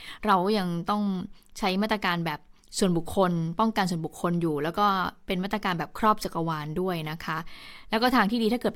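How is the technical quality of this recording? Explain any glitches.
Listening through this speech recording, nothing stood out as a technical problem worth pointing to.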